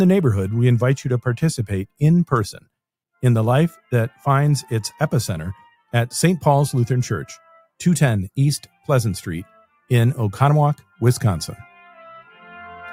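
Sound cut by the noise suppressor appears from 2.52 to 2.69 s, where a stretch of the audio suddenly sinks in level, by about 18 dB at its deepest, for roughly 150 ms in all. The suppressor misjudged this passage as background noise and applied its gain reduction to it as though it were unwanted, pulling wanted sound down well below its surroundings before releasing it again.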